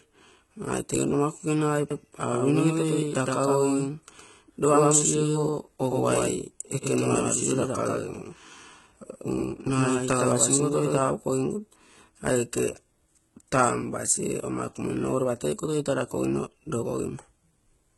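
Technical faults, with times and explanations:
Throughout: HE-AAC compression, heavy enough to suggest a very low bitrate, around 16 kbps. The treble is rebuilt from copied lower bands, so s sounds turn gritty and metallic. A spectrogram shows smeared, blocky upper bands and nothing above 11.8 kHz.
1.91 to 10.99 s: doubled audio track. A second full-band copy, a few dB quieter, trails about a tenth of a second behind, likely from a slower capture path, giving a hard slapback with no room tail. The waveform shows each onset repeated, beginning and ending abruptly.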